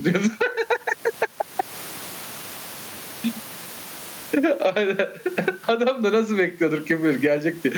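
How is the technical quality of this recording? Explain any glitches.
The recording has one clear fault that runs through its whole length. Gain pumping, throughout: the input gain is likely set far too high, so a fast limiter or compressor clamps down on each loud syllable and releases in the pauses. The level swings by roughly 20 dB, and the room noise sits about 36 dB under the speech, with the speech left squashed.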